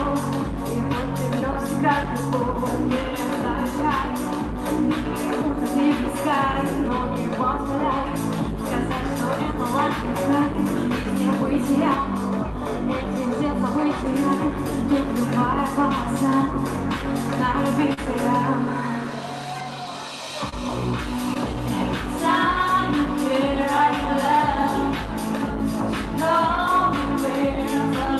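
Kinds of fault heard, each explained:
Short concealed packet loss: Packets arrived too late or not at all, so the receiver invented stand-in audio by extending the preceding sound and then blending back into what actually arrived. Here it happens at 17.93, 20.49 and 21.34 s, with patches of roughly 38, 28 and 14 ms. Each is heard as a brief smear or wobble, and the first also brings a small timing shift of around 20 ms.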